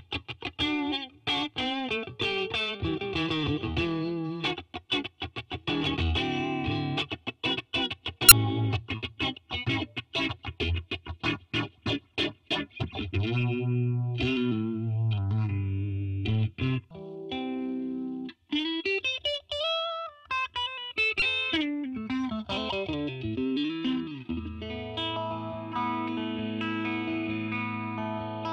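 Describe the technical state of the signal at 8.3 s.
Around 8.28 to 8.32 s there's damaged data in a compressed stream: corrupted bytes throw the decoder off sync, leaving a brief glitch while it hunts for the next frame header.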